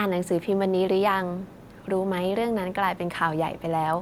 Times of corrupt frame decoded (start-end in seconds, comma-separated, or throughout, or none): none